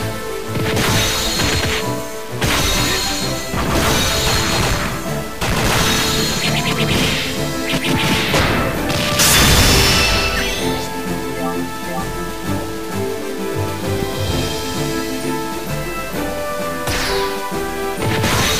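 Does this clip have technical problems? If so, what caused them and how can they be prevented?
Yes. Low bit depth without dither runs through the whole clip: a grainy, gritty distortion that shifts with the sound and sits only around 15 dB below it. It fits audio likely truncated to about 5 bits with no dither, so the rounding error tracks the signal instead of becoming smooth hiss. Keep at least 16 bits through the chain and apply dither whenever reducing word length.

A loud pop hits at 14.03 to 14.05 s, a single sharp spike roughly 10 dB above the surrounding sound, which carries on underneath it. It likely came from a sudden voltage step such as a plug, switch, static discharge or driver glitch. Secure connections, avoid switching during recording, and control static near the equipment.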